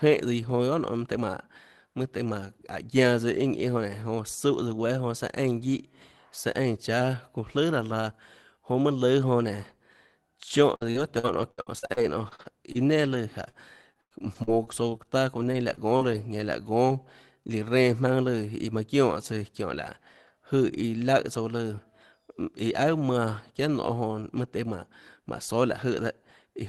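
From 10.69 to 16.41 s, repeated packet loss causes frequent short dropouts, up to 95 ms, patched by extending prior sound, leaving choppy, robotic-sounding speech.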